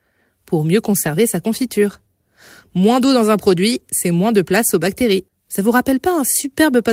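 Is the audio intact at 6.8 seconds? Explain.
Yes, at 6.8 seconds the speech plays through intact, with no dropout, click, distortion or other fault audible at that moment.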